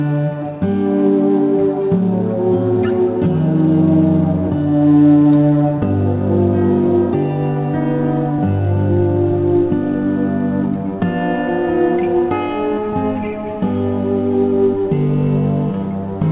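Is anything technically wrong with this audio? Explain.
No, nothing technically wrong can be heard here.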